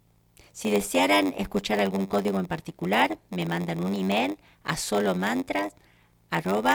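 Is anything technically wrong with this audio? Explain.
Yes. Throughout the speech there is a steady buzz at about 93.8 Hz, and everything runs slightly slow, at 0.938 times normal speed, with the timbre unchanged. This is a block size mismatch with padding. One stage hands over shorter blocks than the next stage reads, which fits a 512-sample read, and each block's shortfall is filled with zeros. Those tiny silent gaps repeat at the block rate, producing the buzz and stretching the timing.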